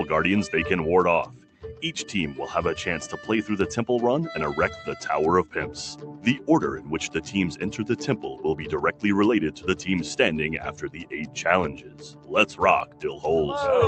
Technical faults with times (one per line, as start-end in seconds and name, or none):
0.00-13.87 noise suppressor applied to music or sounds
1.26-1.82 sound cut by the noise suppressor
5.95-6.48 sound cut by the noise suppressor
10.72-11.36 sound cut by the noise suppressor
11.70-12.31 sound cut by the noise suppressor
12.85-13.24 sound cut by the noise suppressor